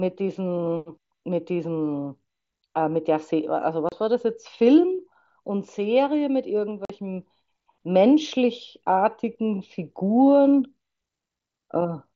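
Speech over an mSBC Bluetooth headset link has unconcealed Bluetooth headset packet loss at 3.89 s and 6.85 s: abrupt silent holes of 30 and 45 ms, left empty rather than smoothed over as concealment would.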